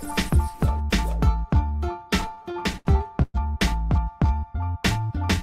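From 2.21 to 3.36 s, repeated stalls (stutter): the jitter buffer kept running dry, so the last sound was stretched through ten pauses, up to 119 ms, covering about a quarter of that span. Unlike dropouts, nothing is lost; the audio drags.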